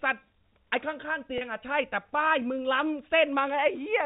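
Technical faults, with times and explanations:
1.38 to 1.41 s, packet loss with pitch repetition: about 30 ms of audio is missing, which fits a single lost packet. The receiver bridges the gap by repeating the last pitch period, so the speech briefly holds on a slightly buzzy, sustained tone before resuming.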